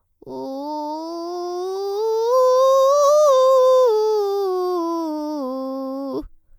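Throughout this music clip the sound is swirly, smeared and hollow, with softened attacks and nothing above about 19.9 kHz. This is generation loss, likely from repeated MP3 re-encoding, around ten passes at a quality that fits 128 kbit/s, with the artefacts building up on each pass.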